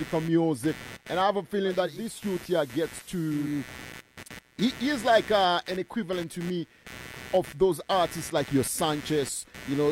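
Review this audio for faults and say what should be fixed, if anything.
Computer activity noise runs through the whole clip. It is a buzzing pulse repeating at around 150 Hz, roughly 20 dB below the speech. It tracks the computer's load, not the speech. Processor and graphics activity shift the shared audio ground. A ground-loop isolator or an external audio interface would prevent it.

Digital radio blending to analogue occurs from 1.61 to 3.76 s. The receiver lost its digital signal and cross-faded to the FM broadcast over 484 ms. Hiss rises to around 20 dB below the speech. The level drops about 3 dB before the audio blends back to digital. Better antenna reception would prevent it.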